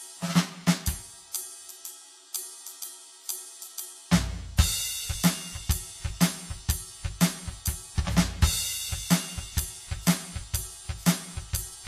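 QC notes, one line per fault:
Throughout: channel delay (comb filtering). One of the two original channels sits roughly 10 ms behind the other, and when they were folded to mono the shared material cancelled at evenly spaced frequencies. The first notch falls near 50 Hz, with further notches repeating about every 100 Hz above it. That dense, fixed comb colours the music with a hollow, phasey character, and at a delay this long it can also edge toward a rough, faintly doubled quality.
Throughout: Vorbis compression. The damage is plainly audible. Nothing is present above 14.1 kHz, and the remaining treble sounds hissy and grainy, with roughened tones and smeared attacks. This is likely the result of Vorbis encoding at a low bitrate, with the sound pointing to somewhere around 31 kbps. At that rate the codec keeps a smooth outline of the spectrum but quantises the upper detail so coarsely that it turns into noise of similar energy.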